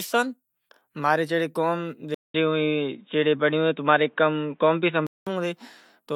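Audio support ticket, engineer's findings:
Speech dull and boxy 2.14–5.27 s, nothing above 3.8 kHz, 200 ms dropout at the switch, level shifts a few dB, faint new background noise. Likely input switched to a poorer device. Gap plus changed noise floor rules out plain filtering.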